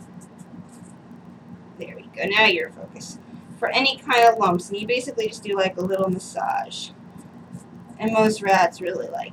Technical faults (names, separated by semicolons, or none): filter restarted on every block